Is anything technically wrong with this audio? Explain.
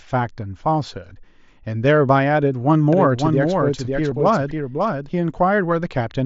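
Yes, two faults are audible through the mSBC headset path. From 2.93 to 5.09 s there is a doubled audio track. A second full-band copy runs about half a second behind, about 5 dB quieter. It likely comes from a slower capture path. At 4.11 s there is concealed Bluetooth headset packet loss. One 7.5 ms frame dropped, and the receiver filled it with recent waveform. It is nearly hidden.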